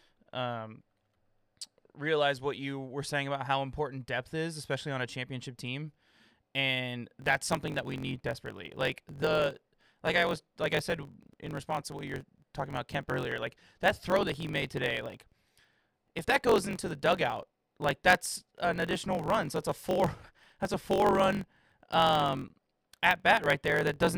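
From 7.20 s to the end of the clip, the speech carries a block size mismatch (truncated). One stage writes blocks longer than the next stage reads, so the tail of every block is discarded. The sound points to 1024-sample blocks being cut short. Each cut leaves a seam, heard as a steady buzz at about 45.9 Hz. Because part of each block is lost, the speech runs 1.07 times faster, at roughly its normal pitch.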